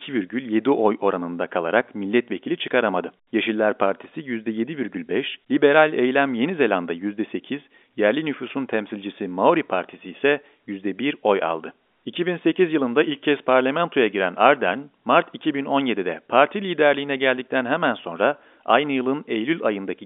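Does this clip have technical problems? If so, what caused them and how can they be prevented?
No, the speech comes through in the ordinary state of a fixed-line telephone call, carried by G.711 A-law coding at 64 kbps and held within a line band of roughly 250 Hz to 3.6 kHz, as that path is meant to work.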